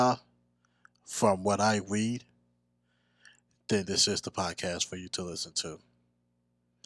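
Speech recording with no audible technical faults.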